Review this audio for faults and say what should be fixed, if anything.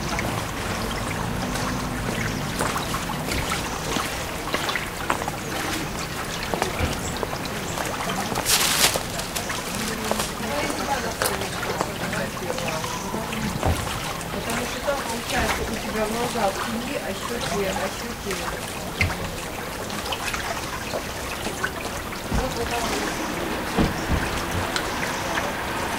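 Nothing to fix here: the sounds in this recording come through without any audible fault, so no corrective work is needed.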